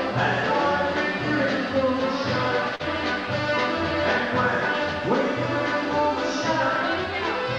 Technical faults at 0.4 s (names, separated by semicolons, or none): none